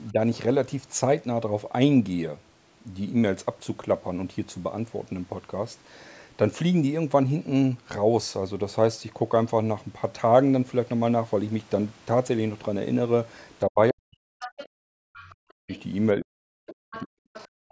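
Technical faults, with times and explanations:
0.12–0.19 s, 13.69–15.71 s and 16.17–17.5 s, speech suppressed in double talk: the talker's level sinks, by only about 5 dB in the brief first dip but by as much as about 40 dB later, with roughly 1.5 s and then about a second lost in pieces. This is likely the echo canceller ducking everything while both ends talk at once. Unlike leakage, nothing is added; the talker's own sound drops out.
14.4–14.69 s, 15.14–15.33 s, 15.72–15.83 s and 16.68 s to the end, other side's voice leaking through: a second, fainter voice sits under the talker's track, roughly 15, 25, 30 and 20 dB below the speech in turn, surfacing as short scraps and then a longer stretch. This is likely loudspeaker playback that the echo canceller failed to remove from the microphone. Unlike suppression, an extra voice appears rather than the talker fading.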